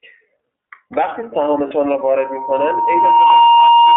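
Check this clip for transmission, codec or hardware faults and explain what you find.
Three faults are present: iLBC codec coding throughout, two lost iLBC frames, and a loudspeaker feedback squeal over the second half.

The iLBC codec applies to the whole clip. It band-limits the speech to roughly 250 Hz to 3.5 kHz and codes each 30 ms frame independently, which fits its 13.33 kbps mode. The result sounds audibly rough and synthetic. A spectrogram shows an empty band above 3.5 kHz.

Lost iLBC frames occur at 1.68 s and 3.27 s, each 30 ms long. The decoder repeats the last pitch cycle mixed with noise, giving a brief buzzy held vowel. On a waveform, each appears as a short run of copied periods.

The loudspeaker feedback squeal starts at 1.99 s and lasts to the end. The microphone re-amplifies the loudspeaker until a 938 Hz tone swells over about a second and a half, reaching roughly 10 dB above the speech. 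A spectrogram shows a single bright horizontal line.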